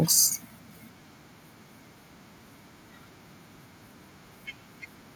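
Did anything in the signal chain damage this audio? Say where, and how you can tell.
No, nothing in this speech recording stood out on listening as damage from any stage of the signal chain.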